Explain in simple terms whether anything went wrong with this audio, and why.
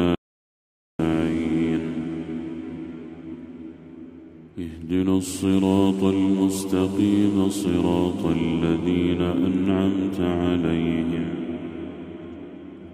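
Something did go wrong near the start. At 0.15 s the sound cuts out completely and only returns at 0.99 s, so about 0.84 s of audio is simply missing. This is an audio dropout to silence, likely caused by the input briefly disconnecting or being muted while recording carried on. Unlike a natural pause or a quiet passage, the gap has no background hiss or room sound at all. It is dead, empty silence, and whatever happened then is lost.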